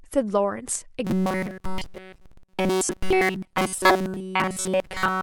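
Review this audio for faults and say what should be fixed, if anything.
Audio likely arrived too seldom between 1.05 s and 5.22 s, so the software kept repeating a stretch of about 5.3 ms instead of playing the real signal. This robotic sound from repeated short buffers forces a rigid 188 Hz buzz onto the speech, making it metallic for the whole stretch. A larger jitter buffer and a steadier incoming stream would keep playback from looping stale audio.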